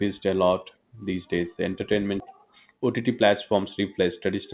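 At 2.2 s there is a skip ahead. The speech jumps forward with no gap at all. About a second of audio is simply missing. The two sides of the cut are butted straight together, so the flow of speech lurches mid-stream. This happens when a stretch of audio is dropped while later audio is already queued, either lost in transit or thrown out of an overflowing jitter buffer. Playback then carries on from the newer material.

From 2.36 s to the end, a jitter buffer speed-up follows. The buffer was holding more audio than it wanted. To shrink that delay, the receiver kept cutting out tiny slices, each one or a few pitch periods long. Pitch stays the same, but the speech runs at about 108% speed. Roughly a fifth of a second is trimmed in total. The result sounds slightly rushed. Throughout, the call path's narrowband sound, with nothing above 4 kHz, fits a G.711 codec.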